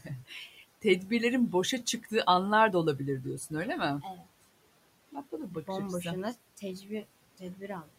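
At 4.02 to 4.27 s, just after "olabilir diyorsun öyle mi", and again at 7.38 to 7.95 s, the noise suppressor cut into the speech, mistaking quiet speech for the room noise, which sits about 22 dB below the talker. Parts of the speech drop by about 15 dB and then about 18 dB, sounding swallowed. On a spectrogram, energy thins abruptly into dark gaps; the waveform shows the envelope pinched down.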